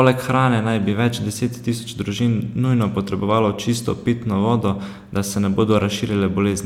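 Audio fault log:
No technical faults can be heard anywhere in this speech recording; the signal stays continuous, with nothing that points to a problem in capture, processing or playback.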